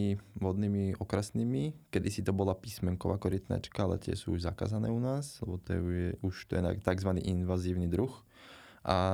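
No technical faults are audible anywhere in the recording.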